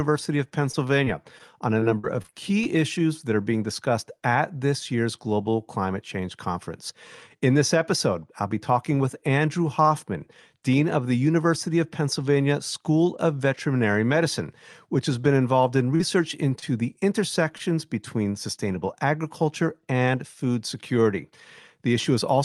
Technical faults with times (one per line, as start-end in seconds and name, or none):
0.71-1.42 repeated packet loss (robotic sound)
1.80-2.67 repeated packet loss (robotic sound)
15.96-16.01 short concealed packet loss
16.59-16.64 short concealed packet loss
17.58-17.61 short stall from a late packet